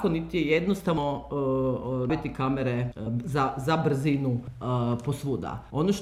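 The audio has compressed frames skipped at 0.97, 2.09, 3.06 and 4.47 s. Each time it jumps forward, losing roughly a tenth to a third of a second, the largest near 2.09 s. The jumps fit whole frames of 26.1 ms that the decoder never played. Unlike a dropout, no silent gap is left.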